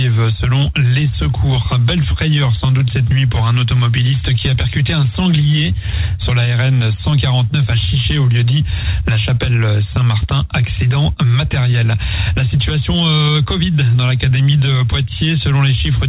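No technical faults are audible.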